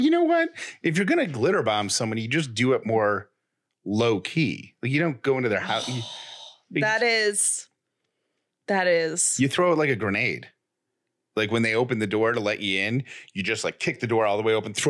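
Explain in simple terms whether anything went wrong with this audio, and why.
Nothing went wrong that I could hear: listening to the speech all the way through, nothing stood out as a problem at any point.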